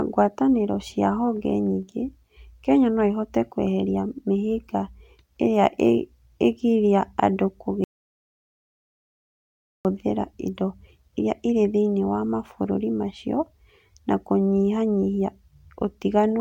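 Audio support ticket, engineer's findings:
Audio dropout to silence, 7.84 to 9.85 s, right after "ĩgiria andũ". Speech cuts off mid-flow, returns abruptly; roughly 2 s lost. Gap is silent, no room tone or hiss. Likely cause: input lost upstream (device disconnect, failed link or mute) while the recorder kept writing silence. Differs from a level dip, where floor noise would persist or the fades would be gradual. Content in the gap is unrecoverable.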